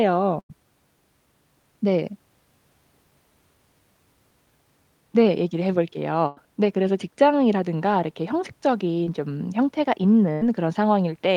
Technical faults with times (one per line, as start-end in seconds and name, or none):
0.39-0.51 burst of packet loss
6.27-6.38 burst of packet loss
9.04-9.08 short concealed packet loss
10.32-10.43 burst of packet loss